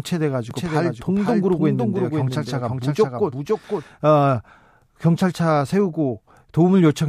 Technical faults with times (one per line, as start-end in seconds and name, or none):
0.51-3.83 doubled audio track